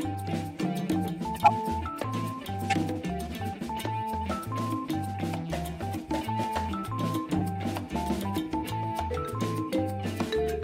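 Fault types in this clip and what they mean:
Corrupt frame decoded: Damaged compressed frames were played anyway. Misread data put energy at wrong frequencies. Brief chirps or noise bursts occur at 1.44–1.51 s, 2.70–2.75 s, 5.19 s and 7.38–7.41 s. The first is loudest, about -10 dBFS. The 5.19 s blip is faint.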